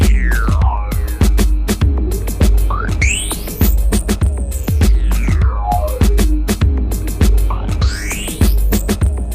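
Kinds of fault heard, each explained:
No kinds of fault are heard in this clip.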